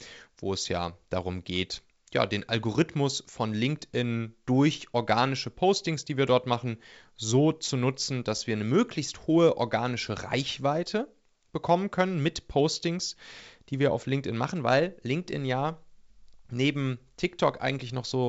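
Nothing faulty is heard in the speech, which carries G.722 wideband telephone coding at 64 kbit/s with a passband to about 7 kHz and at most faint coding damage.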